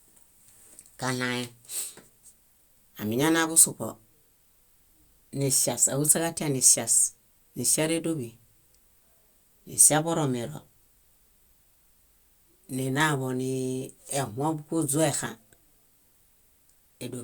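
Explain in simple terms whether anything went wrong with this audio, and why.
Nothing went wrong here.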